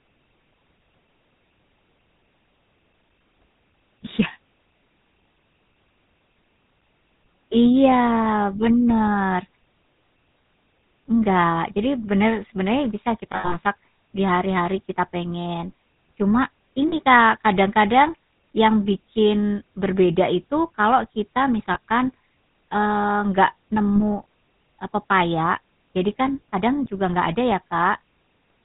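The whole clip passes through the GSM full-rate codec, which models the vocal tract and drives it with sparse, regularly spaced pulses while discarding everything above 4 kHz. The speech comes out dull and plainly buzzy and gravelly, a roughness that fits the 13 kbps full-rate mode.

Lost GSM frames occur at 13.32 to 13.56 s, 16.88 to 16.93 s, 21.74 to 21.78 s and 23.96 to 24.01 s. In place of each missing frame the decoder repeats the last good one, so the sound freezes into a brief rough, metallic ring. The first event, with about 160 ms missing across 200 ms and runs of around 70 ms, stutters the longest.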